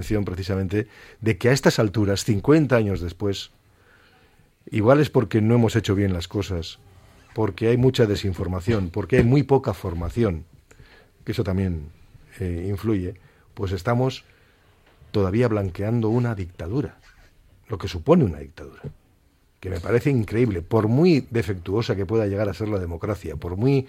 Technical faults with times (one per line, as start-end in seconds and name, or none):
none